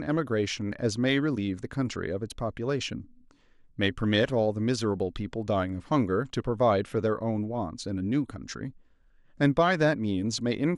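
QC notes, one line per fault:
Throughout: MP2 compression. The speech sounds dull and muffled, with a gurgling, grainy roughness running under it. The upper frequency bands drop in and out, so the top end flickers instead of holding steady. What remains is coarsely quantised. This points to MPEG Layer II coding at a low bitrate, around 80 kbps. The likely cause is a starved bit allocation across its sub-bands, switching the highest ones off. The damage is plainly audible.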